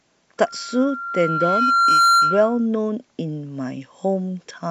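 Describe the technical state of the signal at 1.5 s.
At 1.5 s the signal is in the middle of a loudspeaker feedback squeal that runs from 0.38 s to 2.66 s. The microphone is picking up its own loudspeaker, and at 1.4 kHz the loop gain passes unity, so that tone reinforces itself on every pass. It swells over about a second and a half to roughly 10 dB above the speech. That gradual self-building rise separates it from a steady interfering tone, which would start at full level.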